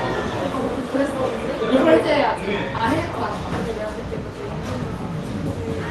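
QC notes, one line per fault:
2.77–2.81 s, short concealed packet loss: about 20 ms of audio failed to arrive in time, and the receiver filled the gap by extending the preceding sound before crossfading back into the real signal, producing a brief smear or wobble.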